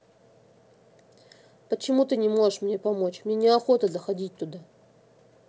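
No technical faults occur in this speech, which has passed through a call path whose band stops at 8 kHz.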